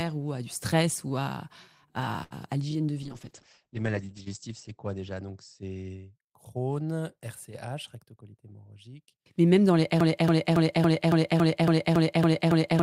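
At 2.23 s, just before "l'hygiène de vie", a short stall from a late packet holds the sound for about 74 ms, until 2.34 s. The jitter buffer ran dry, so the receiver stretched the last bit of audio and then resumed exactly where it left off. Nothing is skipped; the sound simply lingers with a faint buzzy sustain. That distinguishes it from a dropout, which leaves a gap, and from a loop, which repeats.

From 3.06 s, right after "l'hygiène de vie", a call bitrate drop lasts until 6.27 s. The bandwidth estimate fell and the encoder went from 32 to 9 kbps, holding its lowest rate for about 1.35 s. At that rate the audio band narrows from 20 kHz to 8 kHz, so the speech turns muffled and watery, then clears as the rate climbs back. The dullness comes and goes with no clicks. A brief packet problem would not behave that way.

Between 7.96 s and 8.88 s, a jitter buffer speed-up plays the speech about 8% fast. 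The receiver had more audio queued than it wanted, so it cut tiny pitch-period slices, roughly 70 ms in total, to reduce the delay. The pitch stays put while the pace hurries. Simply playing the audio back faster would raise the pitch as well.

At 10.01 s, right after "même dans les", a broken-record loop begins and runs to the end of the clip. A fragment of about 0.28 s repeats identically, back to back, and new audio never returns. The likely cause is a stalled player or stream that kept resending the last piece it held. The repeats are exact copies of a fixed slice, not a held sound, which sets this apart from the earlier stall.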